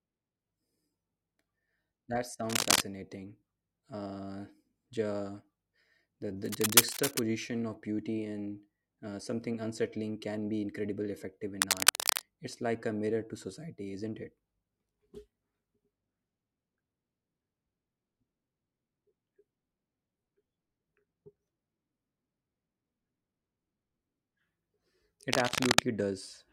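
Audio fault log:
2.49–2.80 s, 6.42–7.19 s, 11.61–12.22 s, 25.33–25.86 s: cable scratch noise. A worn cable or connector being moved likely made its contact resistance jump erratically, laying dense, uneven scratchy bursts over the speech. The first burst is loudest; the second ends just before "of beauty and uh".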